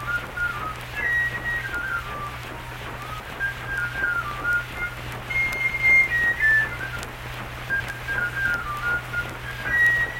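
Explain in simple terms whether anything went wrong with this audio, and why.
Chunks out of order: a 100 ms slice arrived late and swapped with the next, so the sound jumbles at 3.2, 5.6 and 7.7 seconds.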